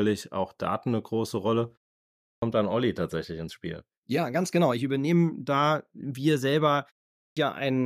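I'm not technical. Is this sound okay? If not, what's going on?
No, there's a clipped start after a pause, twice. At 2.22 s, after about half a second of quiet, the speech comes back with roughly the first 0.2 s missing. At 7.15 s, right after "da wir selber" and a short 0.32 s gap, another 0.22 s or so gets swallowed. The playback device dozes off in the silence and needs a moment to wake, so the speech jumps in abruptly.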